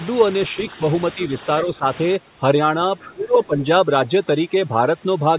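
A speech recording in which the echo canceller, likely caught in double talk, pulls the talker down whenever the far end is also active, producing speech suppressed in double talk. The talker's level sags by about 5 dB from 0.51 to 0.78 s and from 1.15 to 1.33 s, then by about 10 dB from 1.62 to 1.86 s. The deepest cut runs from 3.13 to 3.61 s, where the voice drops by up to about 20 dB over roughly 400 ms of that stretch. Overdone noise removal begins at 2.16 s and lasts to the end. A suppressor set too hard is zeroing any frequency band near its noise estimate, so the room background, which sat about 17 dB under the voice before that point, drops and breaks up into twinkling specks. Softer voice components are stripped along with it. The narrow band, with nothing above 4 kHz, fits a G.711 call path. The other side's voice leaking through appears from 2.99 to 3.46 s, likely because the echo canceller left residual loudspeaker sound in the microphone signal. 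It is a faint second voice about 20 dB below the talker, and it overlaps the deep suppression dip.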